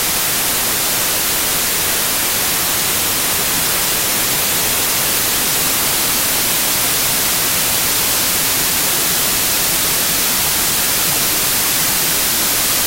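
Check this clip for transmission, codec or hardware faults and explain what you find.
One fault runs through the whole clip: wrong sample width. Loud noise buries the sound, which plays at 0.75 speed with lowered pitch, because 32-bit integer data are being read as packed 24-bit samples.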